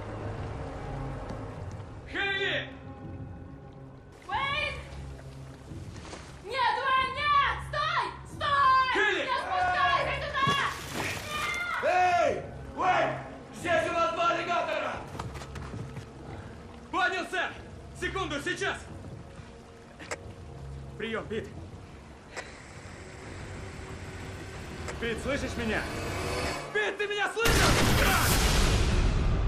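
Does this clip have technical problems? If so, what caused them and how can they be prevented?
Yes. Overlapping chunks cause short stutters at 4.63, 9.68, 14.73 and 24.83 s. Each 5-second block begins 50 ms before the previous one ended, so that slice plays twice. The waveform shows a repeated fragment with a jump at each join, and a spectrogram shows a thin vertical seam there. To prevent it, start each chunk exactly where the last one stopped, or crossfade the overlap instead of appending it.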